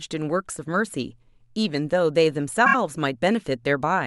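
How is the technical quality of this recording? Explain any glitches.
There is one glitch, a short stutter. From 2.65 to 2.75 s, a repeated frames fault sends one 26.1 ms block three extra times, replaying the speech and adding about 78 ms.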